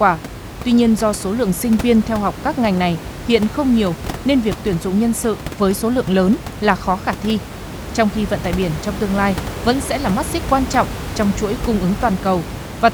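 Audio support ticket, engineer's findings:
No system fault found in the speech; the audible room noise sits about 11 dB below the speech and belongs to the recording environment.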